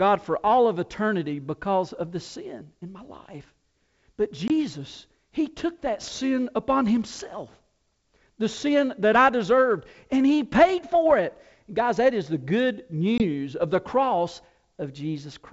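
Hard-edged silent holes at 4.48–4.51 s and 13.18–13.26 s (after "that is the good"), returning briefly distorted: packet loss on an ADPCM call, about one 20 ms packet, desynchronising the decoder's predictor.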